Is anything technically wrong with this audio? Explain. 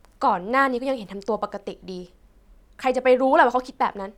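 No, nothing technically wrong is audible anywhere in this speech recording.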